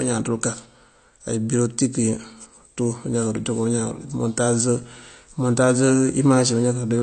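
The speech is marked throughout by what is likely AAC compression. Nothing sounds above 8.6 kHz, and the codec damage is plainly audible. A plain low-pass filter would only dull the top end. Here the loss comes with the smeared, warbling or fizzy texture of AAC-LC quantising each frame's frequency lines against a hearing model, which fits a low bitrate around 32 kbps.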